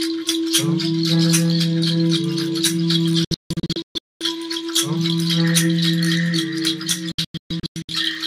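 The receiver failed to decode frames and muted, a digital broadcast dropout. From 3.24 to 4.21 s the sound cuts out in several short holes totalling 704 ms, the longest 224 ms. From 7.12 to 7.89 s it cuts out for 480 ms in all, the longest hole 128 ms. Each cut has only a 3 ms fade, so it is abrupt.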